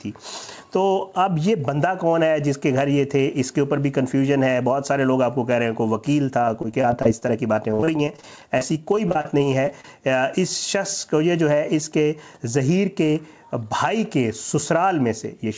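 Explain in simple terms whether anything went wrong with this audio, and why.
Between about 6.42 and 9.97 seconds there's a stretch of repeated packet loss, the robotic sound you get on a shaky call. Over those three and a half seconds, 28 little chunks went missing, none longer than about 49 ms. Each time, the system papered over the hole by stretching the last bit it had, so the audio turns choppy there. The call path itself has nothing above 8 kHz, so the top end is dull throughout.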